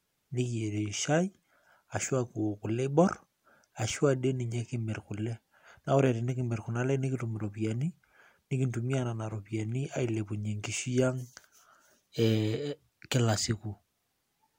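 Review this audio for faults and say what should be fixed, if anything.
Nothing in the recording needs fixing, as the signal stays technically sound throughout with no fault that calls for correction.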